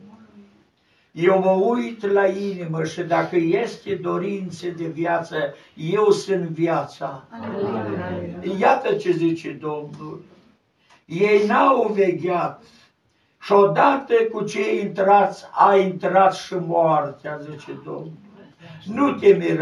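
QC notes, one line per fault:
No technical faults are present; the signal holds steady and continuous across the whole recording.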